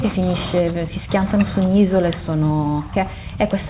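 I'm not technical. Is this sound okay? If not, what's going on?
Yes, nothing stood out as a problem when listening to this speech clip.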